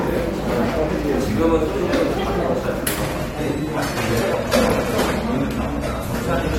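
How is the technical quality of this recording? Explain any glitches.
The first half holds up, but from 3.01 s to the end the quality falls, an adaptive stream at a lower bitrate. The connection likely slowed, so the player switched without a break to a leaner encoding of the same sound, which fits AAC dropping from 96 to 48 kbit/s. With fewer bits, the encoder discards the top band. Nothing remains above 15.2 kHz, so the sound turns abruptly duller, with a thinner, more processed edge.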